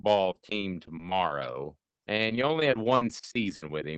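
Nothing in this speech stands out as a technical fault, with the audio simply carrying the ordinary character of a call connection, its top end topping out around 8 kHz in a way that points to an Opus link at a modest bitrate.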